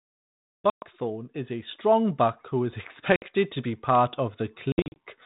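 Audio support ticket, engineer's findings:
Packet loss on an ADPCM call: hard-edged silent holes at 0.70 s (120 ms, before "is a strong buck"), 3.16 s (60 ms) and 4.72–4.97 s (160 ms in short bursts). Unlike plain dropouts, each resumption returns slightly distorted until decoder predictor/step size resync.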